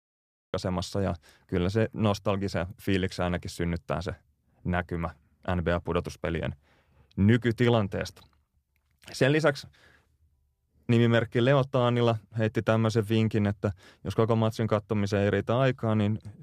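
A cut-off start occupies the opening 0.54 s: the audio sits in digital silence until 0.54 s, then the speech appears abruptly mid-sound. Recording or streaming began late, so the first sound has no natural attack or fade-in and is already underway when it enters.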